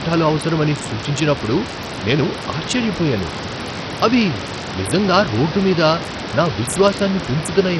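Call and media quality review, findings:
Gritty, coarse speech across the whole clip, treble flickering and nothing above 13.3 kHz; likely Bluetooth SBC compression, starved bit pool near 64 kbps. Room noise about 11 dB below speech.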